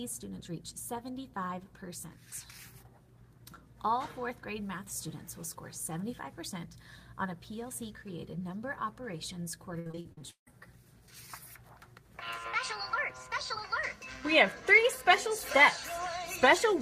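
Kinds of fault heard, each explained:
Repeated packet loss (robotic sound): From 9.79 to 10.48 s, eight holes break up the sound. The longest lasts 156 ms. About half of this stretch is filled by stretching out the preceding sound. The rest drops away. The result is choppy and robotic.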